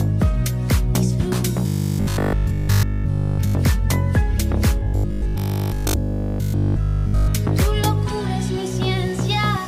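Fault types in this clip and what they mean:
Robotic sound from repeated short buffers: from 1.67 to 3.55 s and 4.80 to 7.36 s, the audio becomes a rigid metallic 50 Hz buzz, likely a 20 ms chunk looping in place of fresh audio. The first stretch is almost all repeats, the second mostly.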